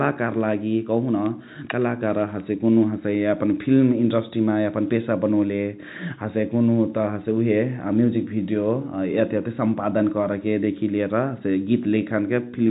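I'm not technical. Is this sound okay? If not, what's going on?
Yes, nothing in this speech is faulty. It has gone through ordinary G.711 telephone coding, so it has the familiar narrow sound of a landline call, with nothing above about 3.8 kHz.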